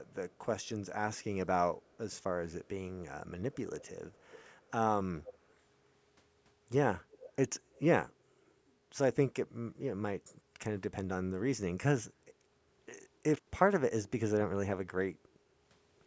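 It's a speech clip with a fair bit of echo leak. A delayed copy of the talker creeps back in at 0.06–0.69, 1.82–1.98, 3.54–4.44, 5.23–5.54, 7.11–7.33 and 7.75–7.81 s, likely from a far-end speakerphone whose echo canceller isn't catching everything. The delay is 240 ms in the first two spots and 307 ms after that. The level climbs from roughly 40 dB down to about 15 dB below the speech at 5.23 s. From 8.61 to 8.9 s the room background gets gated by the echo canceller, dipping by about 7 dB for around 300 ms while the canceller clamps the mic, then coming back. At 13.34–13.47 s there's an intermittent contact: the sound drops out for about 81 ms with crackle on either side, the kind of thing a loose plug or cable does. The band topping out at 8 kHz is just the call's mic processing.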